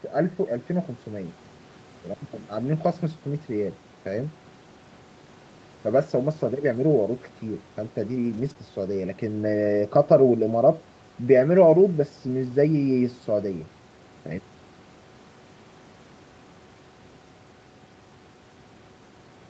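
From 8.25 to 8.51 s, a lost packet was rebuilt from error correction: several packets went missing and the decoder played low-bitrate copies, so about 140 ms sounds rougher and noisier but unbroken. At 8.53 to 8.56 s, short concealed packet loss leaves about 20 ms undelivered; the receiver extends the preceding sound to fill it, giving a brief smear or wobble.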